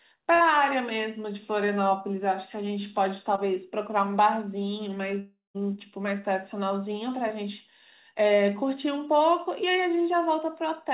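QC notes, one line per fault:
0.34–0.42 s, burst of packet loss: a held, fading smear replaces about 60 ms of audio, then the sound jumps ahead, as the receiver stretched the last sound over lost packets.
1.66–1.70 s, 3.36–3.39 s, 7.28–7.32 s, short concealed packet loss: brief smears or wobbles where about 20 ms went missing each time and the decoder bridged the gap by extending the preceding sound.
5.19–5.56 s, long network dropout: the sound freezes into a fading buzz or hiss, falls briefly silent, then resumes with roughly 0.36 s gone, likely because nothing arrived over the network for that stretch.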